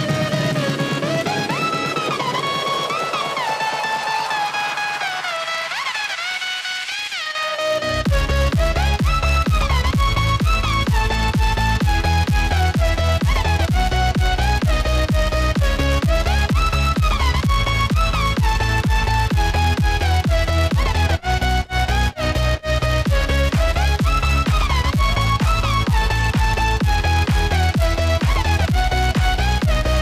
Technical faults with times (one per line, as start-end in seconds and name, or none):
0.00-30.01 filter restarted on every block